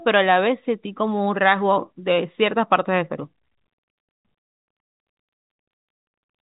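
Nothing here counts as a fault: the speech simply carries the narrow band of ordinary G.711 telephone coding, with nothing above 3.8 kHz, which is just how that phone format is meant to sound.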